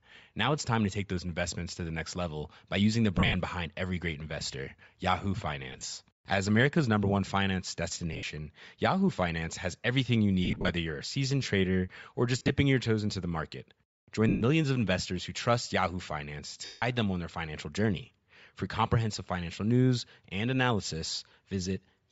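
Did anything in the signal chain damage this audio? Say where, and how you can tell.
Yes. At the codec stage, the whole speech clip carries a breathy, grainy upper band where the high spectrum has been thinned out and replaced with noise. This is likely Bluetooth LC3 compression, which fits a low rate near 32 kbps with 10 ms frames.

At the wireless link, lost LE Audio frames cause brief noisy smears at 3.18–3.34, 5.73–5.83, 8.13–8.23 (after "number one finance"), 10.45–10.69, 12.39–12.50, 14.29–14.42, 16.65–16.82 and 21.29–21.31 s. In each, the decoder reuses the last spectrum with scrambled phase.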